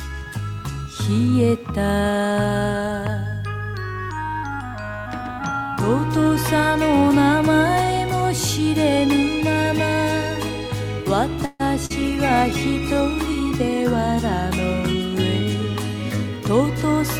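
At 11.45 to 11.62 s the sound stretches into a fading buzz, then about 20 ms of silence. That's likely a call audio freeze, with nothing lost but everything arriving about 142 ms later. At 11.86 to 11.92 s there's short concealed packet loss: roughly 40 ms never arrived, so the receiver patched it by extending the previous sound, giving a quick smear. From 12.02 to 13.12 s a call bitrate drop takes Opus from 48 to 17 kbps, and for about a second the sound goes rough and dull.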